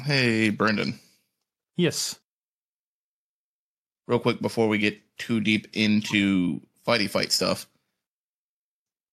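Speech, with a corrupt frame decoded from 6.02 to 6.13 s, just after "too deep": a short burst peaking near -15 dBFS across a few frames, where flipped bits misplace spectral energy. Unlike packet-loss concealment, which smears or repeats the preceding sound, this adds foreign noise.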